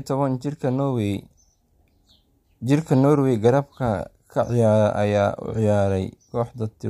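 No technical faults can be heard anywhere in this recording.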